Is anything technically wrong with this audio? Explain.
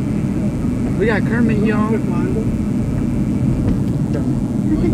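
Yes. A mains buzz runs through the whole clip: sharp switching spikes from a dimmer, rectifier or poor shielding enter twice per 60 Hz cycle, spreading harmonics into the kilohertz range. It sits about 25 dB below the wanted sound as a steady, raspy buzz.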